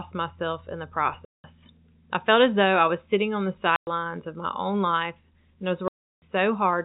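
Packet loss filled with silence: the receiver played silence where packets never arrived, which fits 10 ms packets. Hard-edged holes fall at 1.25 s after "myself in the" (190 ms), 3.76 s between "was sitting on the" and "of my own" (110 ms), and 5.88 s after "and I was" (340 ms).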